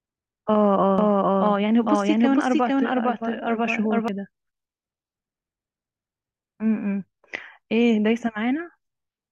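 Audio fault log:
0.98–4.08 s, doubled audio track: a second copy of the speech, about as loud as the original, trails it by about half a second, dry and full-band, starting and stopping abruptly. Likely cause: a second, slower capture path mixed in out of step.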